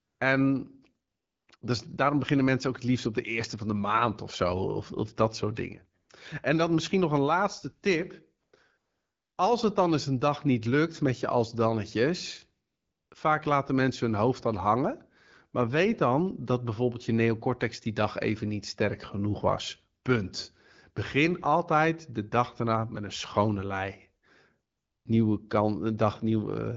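AMR comfort noise fills eight pauses, at 0.00–0.19, 1.07–1.47, 1.57–1.61, 6.01–6.09, 8.43–8.53, 8.77–9.37, 12.67–13.11 and 24.71–25.05 s. During each, the phone stopped sending speech frames and the receiver substituted synthetic noise. Unlike a noise gate dropping to silence, the real background is replaced by a smooth, steady hiss that switches in and out at the edges.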